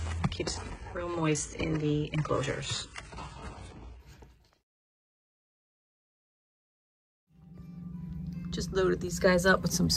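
From 0 to 4.0 s the adaptive stream is starting at a low bitrate. Nothing is heard above about 11 kHz, and artefacts are strong. This fits a 12 kbit/s HE-AAC start. At 4.0 s it steps cleanly up, like 96 kbit/s AAC-LC.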